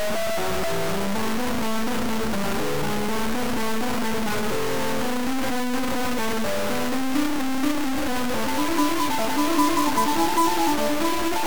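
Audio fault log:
throughout: low bit depth without dither. The music is buried in harsh, grainy distortion that shifts with every change in level, and quiet passages sputter or drop out. The likely cause is undithered truncation, fitting 3 bits, leaving error roughly as loud as the music.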